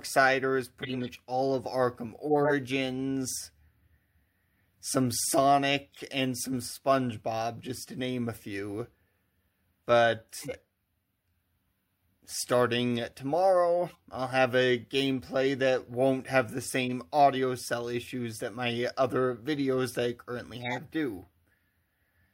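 Short chirps, squeaks and noise bursts break into the audio seven times: 0.82 to 1.09 s, 2.26 to 2.52 s, 5.92 to 5.98 s, 10.29 to 10.60 s, 13.88 to 14.00 s, 16.85 to 16.92 s and 20.60 to 20.78 s. The one near 2.3 s is loudest, and those near 5.9 s and 13.9 s are faint. This is a corrupt frame decoded: damaged compressed frames were played anyway, spraying energy into wrong frequencies for a few frames each time.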